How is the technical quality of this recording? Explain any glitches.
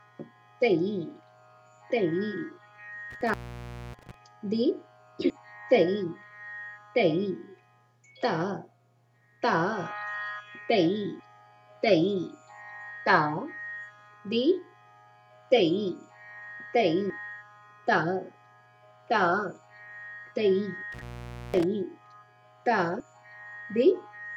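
The recording has two kinds of glitch, each occurring more than once.

Intermittent contact at 3.1–4.1 s and 20.92–21.64 s: a loose connection opens for about 0.6 s and 0.5 s, dropping the sound with crackle at each edge. The waveform collapses to faint hiss, and the spectrogram shows vertical crackle lines bracketing the gap.

Audio missing between chunks at 5.3 s, 17.1 s and 23.0 s: about a tenth of a second vanishes, likely lost at boundaries between 6-second processing chunks. Each is an abrupt skip, seen as a hard splice in the waveform and a vertical seam on the spectrogram.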